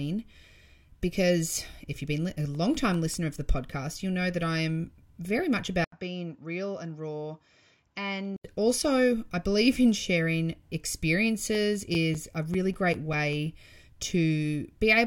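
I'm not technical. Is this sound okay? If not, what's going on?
No, there are two problems. First, CD scratch ticks: between 2.15 and 3.93 s (right after "because if you've") there are 10 little ticks, and from 11.55 to 13.53 s there are 11 more, about five or six a second. A scratch is making the player lose tiny bits of sound, at most a few thousandths of a second each.

Second, it sounds like the input switched to a poorer device. At 5.84 s, just after "I am very much", there's a brief gap and then the sound turns duller and a bit quieter, with different background noise. It clears up again at 8.44 s, before "also I believe in". A mid-recording mic change is the likely cause.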